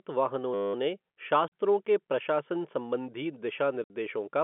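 At 0.54 s the sound locks into a system hang loop for about 0.2 s, ending at 0.74 s. The machine or its driver stalled while the audio hardware kept replaying whatever sat in its ring buffer. Here that's a 10 ms slice, which fits a 10 ms buffer, repeated about twenty times. Because the slice is so short, it comes across as a steady 100 Hz buzz, not a stutter, and then the sound picks up again.

Then there's packet loss filled with silence, twice. The first hole runs from 1.48 to 1.51 s, just before "के प्रशासन संबंधी", and has 40 ms missing. The second runs from 3.84 to 3.9 s, right after "के प्रशासन संबंधी", and has 60 ms gone. The receiver just dropped silence where the missing packets should've been. Both gaps fit multiples of 20 ms packets, with abrupt edges. All of this is riding on G.711 phone-band audio.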